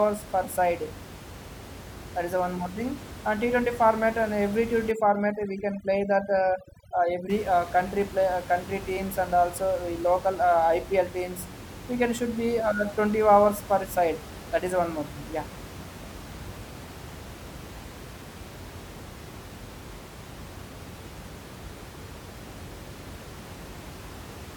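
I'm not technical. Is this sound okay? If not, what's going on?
No. From 4.91 to 7.30 s, just before "uh country play uh", there is overdone noise removal: a cleanup tool set too strong pushes the background noise down and breaks it up into twinkling specks. Unlike a plain dropout, the sound never stops, and the room noise elsewhere is normal.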